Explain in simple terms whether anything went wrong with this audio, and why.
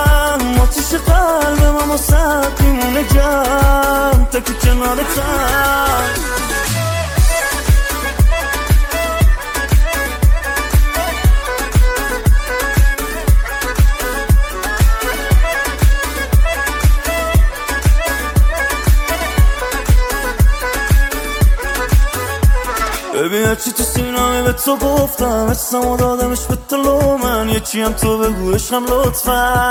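Nothing went wrong with this audio that a listener can pick out. At no point does anything in the sound stand out as a technical problem, so there is nothing here to explain or fix.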